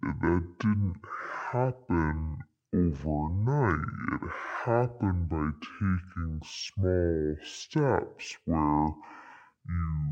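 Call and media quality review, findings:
Stereo read as mono, entire clip. Speech runs at half speed, an octave low. Likely channel-count mismatch: interleaved left and right samples played sequentially as one channel.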